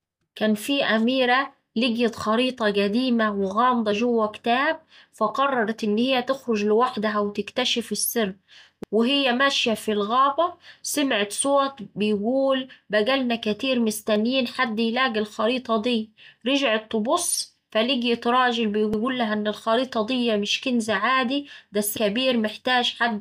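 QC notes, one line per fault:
8.84–8.94 s and 18.94–19.04 s, overlapping chunks: a brief stutter where a 100 ms slice of speech plays twice, first just after "تخرج لوحدها وتكتشف السر" before "وهي ماشية في الغابة", then just after "فلقيت راجل" before "إن الخريطة دي مش". The joins fall 10 s apart because the audio was handled in 10 s chunks, each one starting 100 ms before the previous one ended, so that overlap is heard again at every boundary.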